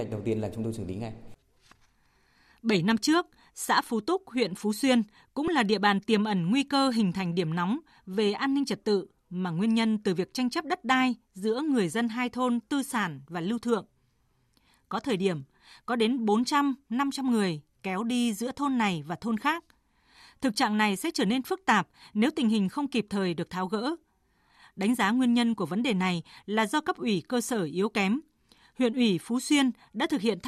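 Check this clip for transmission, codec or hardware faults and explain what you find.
One fault is found in the speech. An underrun with held sample at 5.48 s, just before "là địa bàn tiềm": the output buffer briefly ran dry and the converter held its last value for about 1.33 ms, a gap of 64 samples. The waveform flattens, then playback resumes where it stopped, so the ending is softer than when audio is lost.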